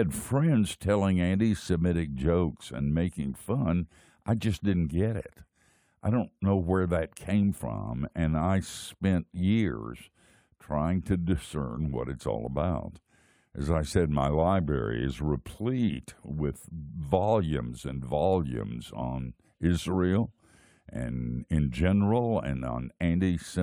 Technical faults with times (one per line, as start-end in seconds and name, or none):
none